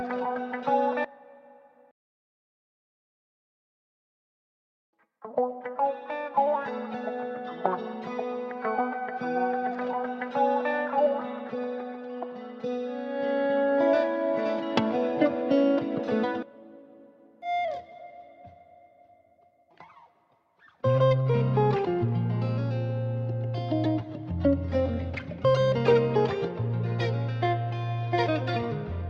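No technical faults can be heard anywhere here.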